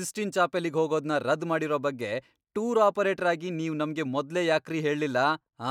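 No technical faults are audible anywhere in the recording.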